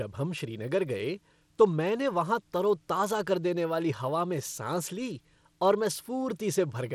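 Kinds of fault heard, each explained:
Bluetooth SBC compression: The speech carries plainly audible coding damage throughout and nothing above 17.2 kHz, likely from SBC's few fixed sub-bands being coarsely quantised without a hearing model, at a data rate that sounds to be around 96 kbps.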